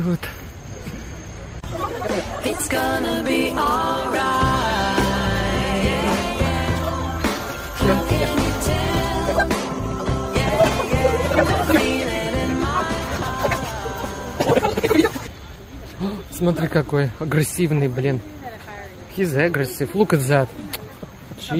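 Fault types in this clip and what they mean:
call bitrate drop: the encoder's bit budget fell, consistent with roughly 32 to 16 kbps, so from 8.74 to 12.25 s the sound is coded more coarsely and rougher.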